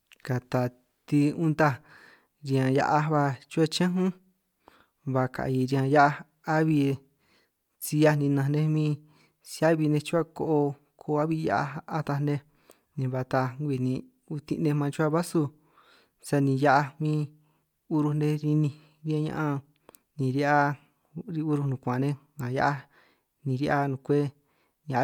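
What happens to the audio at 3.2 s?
Nothing goes wrong at 3.2 s; the speech runs through that moment intact, with no dropout, click or distortion to be heard.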